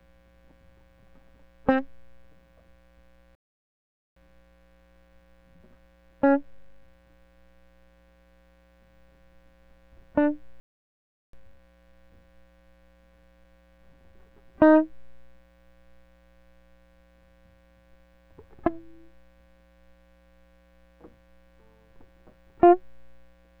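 Playback stalls at 3.35–4.16 s and 10.6–11.33 s silence the music for about 0.81 s and 0.73 s, likely because the player's buffer ran dry or its thread was blocked. Time-compressed catch-up follows each, from 4.16 to 7.16 s and 11.33 to 14.33 s, where small cross-faded cuts hurry the music to 1.1 times speed at unchanged pitch.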